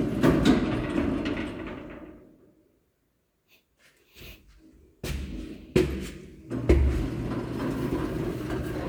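No technical faults are audible.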